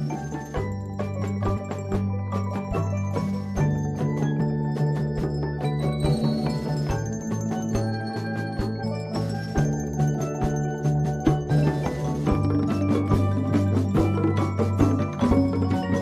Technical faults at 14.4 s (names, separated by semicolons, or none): none